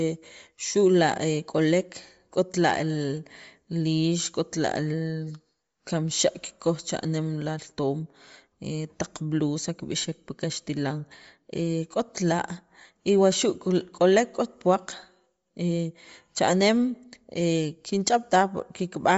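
A speech clip with Bluetooth LC3 compression damage from start to finish, plainly audible throughout. Nothing reaches above about 7.7 kHz, and the top of what remains has a breathy, grainy sheen where the codec has zeroed spectral detail and filled the gap with noise. That noise fill is what sets it apart from a simple low-pass filter, which would leave a clean, dull top. The likely cause is a low LC3 bitrate, around 32 kbps, with its short 10 ms frames.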